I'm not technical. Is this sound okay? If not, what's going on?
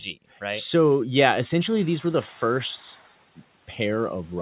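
No. The noise suppressor is catching up: background noise jumps at about 1.5 seconds, leaks through from 1.64 s, then fades by 3.13 s once the suppressor adjusts.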